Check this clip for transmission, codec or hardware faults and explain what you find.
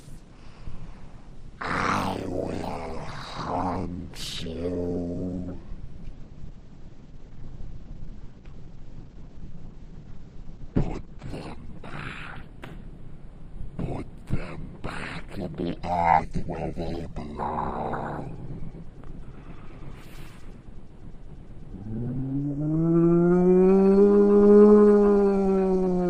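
One fault is present. Call bitrate drop, 6.19 to 11.35 s: falling bandwidth estimates starved the encoder, fitting a plunge toward 10 kbps, so audio turns coarse and muffled, cut off above 8 kHz.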